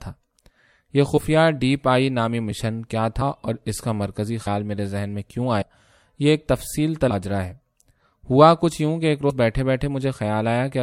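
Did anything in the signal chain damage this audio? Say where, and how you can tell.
Yes, at the codec or storage stage: compressed frames skipped. At 1.16–1.18 s, 4.46 s, 5.61 s, 7.09 s and 9.29 s the speech jumps forward with a brief join, losing roughly 30, 100, 150, 200 and 70 ms. The skips come in frames of about 26 ms, which points to whole frames missing or rejected by the decoder. A buffer dropout would leave a gap; here nothing pauses, and the speech simply lurches ahead.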